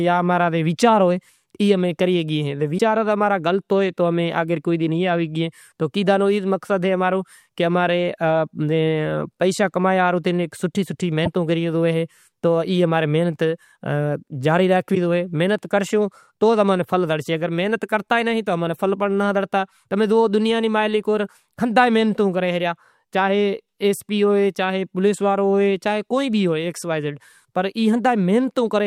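A likely broken MP3 bit reservoir, where dropped frames leave the next frames reading borrowed data from the wrong bytes, makes the speech jump ahead with a brief garbled glitch at 2.77 to 2.80 s, 11.25 to 11.27 s and 14.94 to 14.97 s, each roughly one 24 ms frame long.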